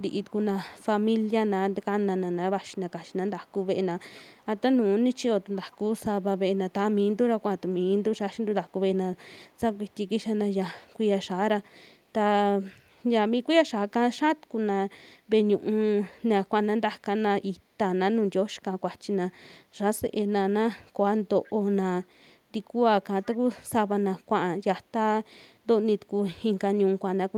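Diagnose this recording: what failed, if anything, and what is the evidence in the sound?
Echo leak, call processing: faint delayed repeats, about 25 to 35 dB down and trailing by 0.46 s, at 0.0–1.26, 2.67–4.46, 5.13–6.23, 9.73–9.97, 21.44–21.53 and 23.24–23.37 s. A spectrogram shows ghost copies offset by 0.46 s, likely from loudspeaker pickup the canceller missed.

Background gated by the echo canceller, call processing: around 25.41–25.52 s the room sound dips about 8 dB for roughly 100 ms. The waveform shows a brief notch in the noise floor where suppression clamped.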